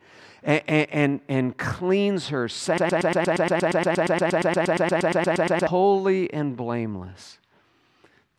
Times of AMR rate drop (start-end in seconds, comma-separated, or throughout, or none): none